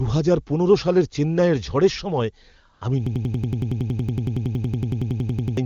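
A speech recording where, from 2.73 to 2.81 s, AMR comfort noise replaces the real background for 80 ms: the codec stopped sending speech frames and synthesised a smooth, steady hiss, which shows as a flat, featureless band on a spectrogram. From 3.07 to 5.57 s a system hang loop repeats one roughly 93 ms slice about 27 times at 10.8 Hz, a machine-gun stutter that fits a 4096-sample buffer. On the waveform it appears as identical repeating blocks, and about three seconds of real audio are lost. The AMR-WB wideband coding itself leaves at most faint traces.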